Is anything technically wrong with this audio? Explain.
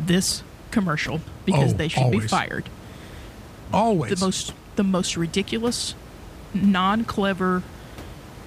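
No, nothing here points to a technical problem, and the faint room noise you can hear sits about 19 dB below the speech as part of the original recording.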